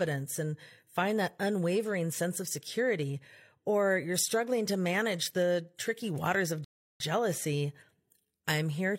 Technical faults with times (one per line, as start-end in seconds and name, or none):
6.64-7.00 rebuffering stall